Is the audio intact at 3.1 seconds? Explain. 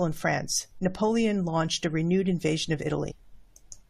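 No. Compressed frames were skipped from 3.1 to 3.12 s, just after "a renewed invasion of": a few damaged or missing frames went unplayed, so the speech jumps ahead by about 70 ms, which fits three frames of 23.2 ms.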